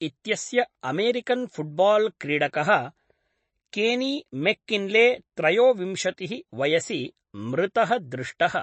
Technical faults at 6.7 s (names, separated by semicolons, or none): MP3 compression